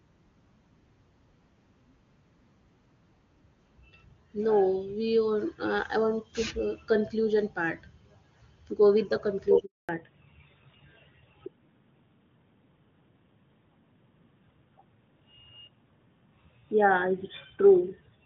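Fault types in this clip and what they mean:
handover gap: From 9.65 to 9.89 s the call switched networks and no speech frames arrived. The sound dies away within a few tens of milliseconds, leaving 240 ms of silence. The waveform flatlines, and the spectrogram shows an empty vertical band across all frequencies.
fallback to narrowband: From 9.89 s to the end, the call drops from HD Voice to an older narrowband codec. Before the switch the wideband path is clean, with energy reaching past 6 kHz. Afterwards everything above 4 kHz is gone, and the sound turns duller and rougher. The spectrogram shows a hard ceiling at 4 kHz.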